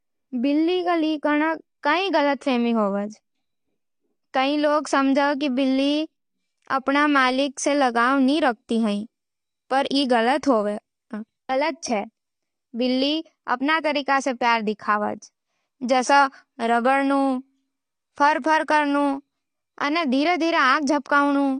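Throughout the clip the audio is dull, with nothing above about 9.7 kHz, and sibilants carry a fizzy, warbling smear. That texture, which a simple low-pass filter would not add, points to AAC compression, likely AAC-LC at a low bitrate near 32 kbps.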